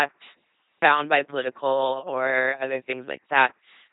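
From start to finish the speech has passed through an LPC-10 vocoder, and the damage is heavy. The voice is rebuilt from a pulse train or from noise, feeding a simple vocal tract filter. Each moment is forced to be fully voiced or fully unvoiced. The result is a buzzing, mechanical robot voice. Wrong voicing choices add stray buzz or hiss. Nothing sounds above 3.8 kHz. This fits a 2.4 kbit/s coder.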